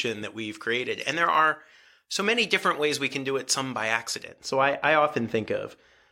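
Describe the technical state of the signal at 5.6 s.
At 5.6 s the speech signal is intact, with no audible technical fault at that point.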